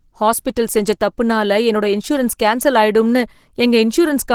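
Throughout the speech, Opus compression likely at around 16 kbps in hybrid mode leaves it hoarse and grainy rather than swirly like MP3, with content still reaching past 20 kHz.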